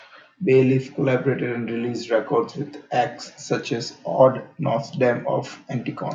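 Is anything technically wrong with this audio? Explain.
No, nothing in this speech recording stood out as technically wrong on listening.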